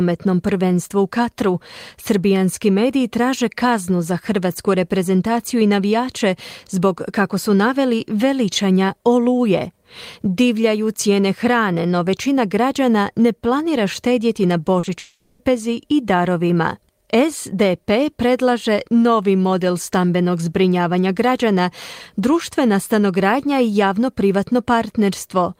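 A speech clip with two short concealed packet losses and a long network dropout, all just after "ne planira štedjeti na". The first short loss runs from 14.79 to 14.85 s and the second follows straight on to 14.89 s, about 40 ms and 20 ms of missing audio. The decoder bridged each gap by extending the preceding sound, so the result is a brief smear or wobble. On a spectrogram, the harmonics or noise stretch across the gap with unnaturally steady texture before merging back into the real signal. Then, from 14.99 to 15.41 s, the sound turns into a fading buzz-like continuation for roughly 400 ms, ending in a short stretch of near-silence before the audio resumes at "i darovima", with that portion simply gone. This is likely a network dropout during which no packets arrived. The waveform shows a decaying envelope into a flat gap, and the spectrogram shows smeared, thinning bands that fade into blank space before the abrupt restart.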